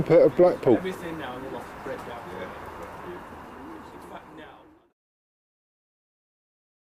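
No technical faults can be heard anywhere in this audio.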